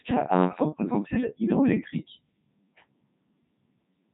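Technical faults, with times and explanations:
throughout, Codec 2 vocoder: speech is resynthesised from pitch, voicing, energy and envelope alone, fitting a 3.2 kbit/s mode, so it sounds heavily robotic and buzzy, with nothing above 3.8 kHz.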